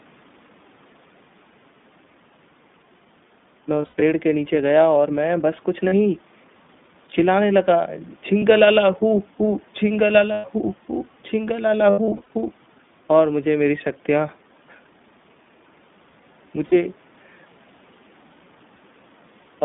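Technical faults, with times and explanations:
Throughout, iLBC codec: the whole clip is confined to a line band of 150 Hz to 3.6 kHz, with a rough, slightly synthetic texture. This fits iLBC's 15.2 kbps mode coding each 20 ms frame on its own. A spectrogram shows a hard ceiling near 3.6 kHz.
3.82–4.02 s, 5.88–5.94 s, 8.38–8.43 s, 10.32–10.46 s, 11.90–12.30 s, 16.66–16.74 s, lost iLBC frames: the speech briefly turns into a held, buzzy vowel. The losses are 40 to 220 ms each, with the longest two scattered in short bursts. The decoder fills the gaps by repeating the last pitch cycle with added noise. The speech snaps back as soon as frames arrive again. A spectrogram shows smeared, repeated harmonic stripes.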